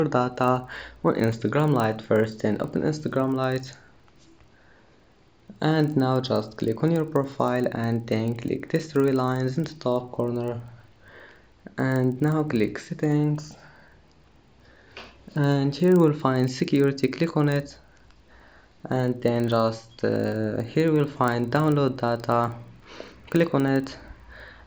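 A resampler restarted on every block runs from 0.32 s to the end of the audio, heard as a steady buzz at 25 Hz that rides on the sound and disappears in silence. The rate points to 40 ms blocks, each converted on its own, which fits an upsampling from 16 kHz to 48 kHz. Without the neighbouring samples at each block boundary, the converter leaves a small error at every edge.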